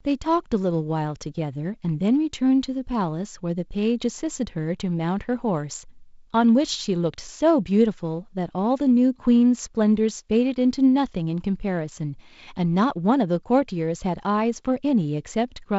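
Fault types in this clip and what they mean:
No faults can be heard in this speech clip. It runs over a working G.722 wideband telephone path at 48 kbit/s, which leaves only light coding texture and nothing above about 7.7 kHz.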